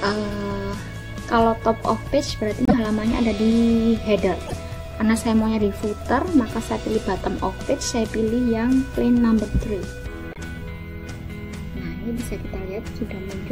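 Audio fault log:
2.65–2.74 s, 4.46–4.54 s and 10.31–10.39 s, broken MP3 bit reservoir: each time the sound skips forward and then the first frames after the jump come out wrong, roughly 80 ms long, before settling. The length fits about three 26.1 ms frames going wrong in a row. The likely cause is frames dropped from the stream. The decoder then reaches back into the reservoir for borrowed bits, gets bytes belonging to some other frame, and renders that as a chirp, a burst of noise or a short hole.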